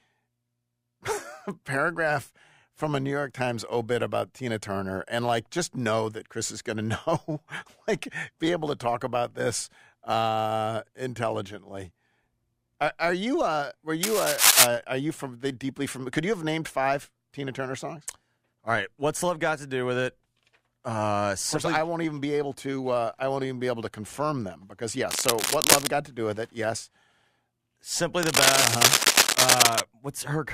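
Cable scratch noise rasps over the speech from 14.03 to 14.67 s, just before "are you from the"; from 25.09 to 25.88 s, between "to confirm them because" and "got to do with"; and from 28.23 to 29.80 s. Each burst is dense and uneven, somewhat louder than the speech, most likely from a worn cable or connector being moved. Unlike steady crackle or isolated clicks, it comes in short rustling spells.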